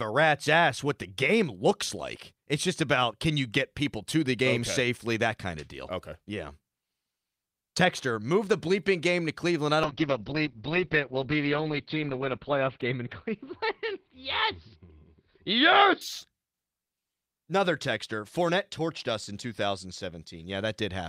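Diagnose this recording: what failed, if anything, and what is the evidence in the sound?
A call bitrate drop runs from 9.85 s to 16.85 s. The speech turns rough and muffled, with the top end cut to about 4 kHz for 2.19 s at its worst. The encoder was starved of bits, coding coarsely at what sounds like roughly 7 kbps.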